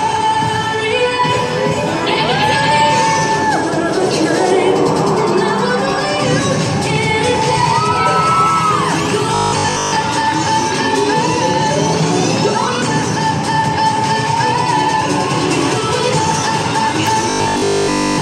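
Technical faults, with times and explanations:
9.34–9.98 s and 17.3–18.2 s: robotic sound from repeated short buffers. Both passages take on a rigid, metallic buzz at 50 Hz that only loosely tracks the underlying sound. The likely cause is new audio arriving too seldom, with playback filling each gap by looping the last 20 ms of signal while the real material is skipped. That loop rate imposes the fixed 50 Hz pitch. In the first passage most of what is heard is repeated; in the second, which runs to the end of the clip, all of it is.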